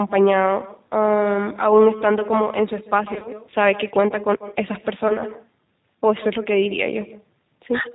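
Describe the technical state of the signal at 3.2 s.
At 3.2 s the signal sits inside a stretch of VoIP packet loss concealed by the speech codec, running from 3.14 to 3.31 s. About 60 ms of audio went missing across an 80 ms window, the longest gap 40 ms. The decoder extended its last pitch and filter state with falling gain, so the sound smears into a buzzy tone or coloured noise that fades, and stays weak or distorted for tens of milliseconds or more after packets return.

The G.729 codec is also at work here, at 8 kbit/s. It rebuilds the signal from a compact source-filter model, cutting everything above 4 kHz and leaving a plainly rough, slightly synthetic texture.

Echo with no canceller runs underneath as well. A copy about 16 dB down returns roughly 150 ms later, thinner, because the far end's loudspeaker feeds its microphone and nothing removes the loop.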